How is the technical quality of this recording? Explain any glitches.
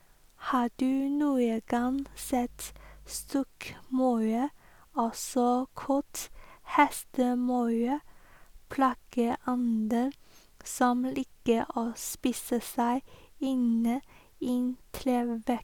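A ground loop or nearby transformer lets the 50 Hz power line leak into the signal path, causing mains hum from 1.78 to 3.28 s, just after "du noen". It adds a steady low drone with some low harmonics, sitting roughly 25 dB below the speech.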